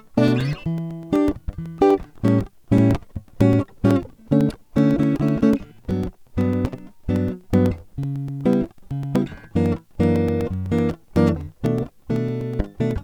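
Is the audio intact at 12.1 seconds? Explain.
No, 12.1 seconds sits right inside a run of periodic USB or driver dropouts lasting from about 0.16 to 12.91 seconds. Every 0.125 seconds something stalls the USB bus or audio driver, and roughly 2 ms of the music is lost and replaced with silence. That gives you a steady eight-per-second ticking, around a hundred little pops in all, audible wherever the music is playing.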